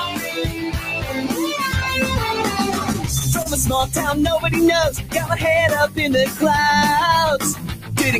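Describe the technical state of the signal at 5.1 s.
At 5.1 s the signal sits inside a stretch of sound cut by the noise suppressor, running from 4.96 to 5.15 s. The suppressor judged this material to be noise and pulled it down, by about 9 dB at its deepest. A sudden edge would slip through, but here the sustained and fading energy sinks. On a waveform the envelope narrows sharply for roughly a fifth of a second. A spectrogram shows that stretch fading.

This dip is part of a wider problem: a noise suppressor applied to music or sounds, left active across the whole clip. Because it was built for speech, it treats steady tones, ambience and reverb as noise and rides them down, with gain swinging by around 10 dB. Held material thins and pumps while attacks stay comparatively intact. On a spectrogram the sustained regions flicker between full and weakened, and decays cut off abruptly rather than tapering away.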